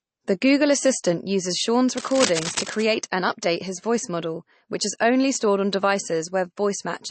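This speech clip has a plainly audible watery, swirly texture throughout, and nothing remains above about 8.3 kHz, so the top end sounds dull. The likely cause is MP3 compression at a low bitrate, in keeping with 32 kbps, where the encoder drops weak frequency lines that flicker between frames and cuts the treble. From 1.97 to 2.84 s, just before "and update his voice", a burst of cable scratch noise rustles over the audio only a little below the speech, likely from a worn cable or connector being moved and its contact changing rapidly.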